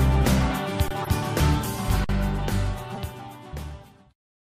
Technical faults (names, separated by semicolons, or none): underrun with held sample; corrupt frame decoded